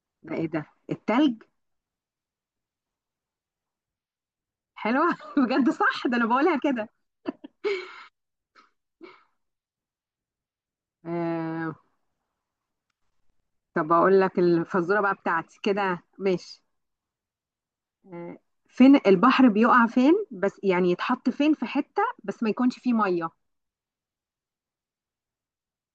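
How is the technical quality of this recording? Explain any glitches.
No glitches or technical faults can be heard here.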